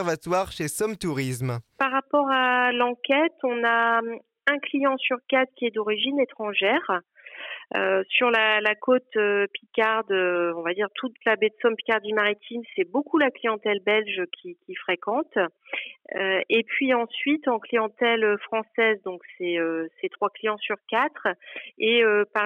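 Nothing in the audio stood out as a technical problem on listening.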